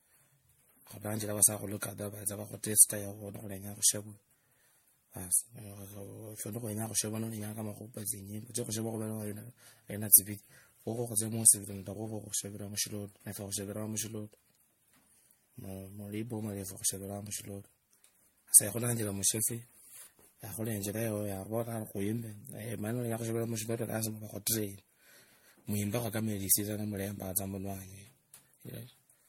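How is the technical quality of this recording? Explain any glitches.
The recording's quality is degraded throughout by what sounds like generation loss. The speech is swirly, smeared and hollow, with blurred consonant attacks and nothing above 16.5 kHz. This fits MP3 at around 64 kbit/s, likely re-encoded about seven times, each pass compounding quantisation noise and spectral holes.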